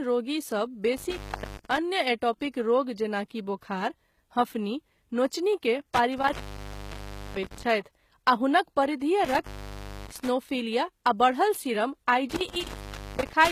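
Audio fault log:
Throughout: HE-AAC compression. Codec damage is plainly audible, and nothing is present above 14.9 kHz. The treble sounds rebuilt rather than original, which likely comes from spectral band replication copying lower bands upward, consistent with a low bitrate around 20 kbps.
0.97–1.78 s, 5.94–7.67 s, 9.25–10.28 s, 12.30–13.51 s: intermittent contact. The sound breaks up and drops out, with crackle at the edges. The line stays open for about 0.40 s, 1.02 s, 0.59 s and 0.56 s, leaving hiss as a loose connection opens and closes.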